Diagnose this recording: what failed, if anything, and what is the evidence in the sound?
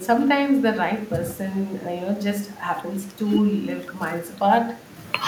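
Call processing failed: echo with no canceller. Throughout, the speech returns about a fifth of a second later, about 15 dB quieter and thinner. The far loudspeaker feeds back uncancelled.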